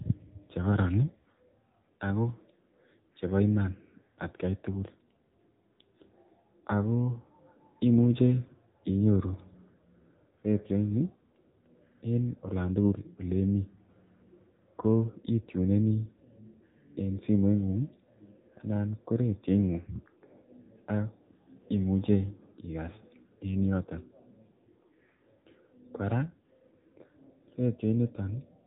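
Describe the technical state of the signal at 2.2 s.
At 2.2 s the speech carries AMR narrowband mobile codec damage, present throughout the clip. The vocal-tract model rebuilds each 20 ms frame from sparse pulses, and nothing above 3.8 kHz survives, giving a plainly buzzy, synthetic, muffled tone that fits a low rate near 7.95 kbps.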